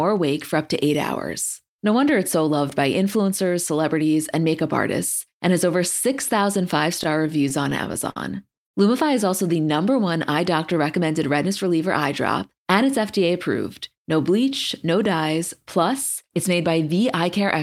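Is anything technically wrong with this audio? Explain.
Yes, there's a stretch of repeated stalls (stutter) between about 7.03 and 8.17 s. Packets were showing up late or slower than playback, so the jitter buffer kept running dry, nine times here. Each time, the receiver stretched the last bit of sound to cover the wait, the longest about 50 ms, around 144 ms in total. Nothing actually drops out, but the speech hitches and drags through that second.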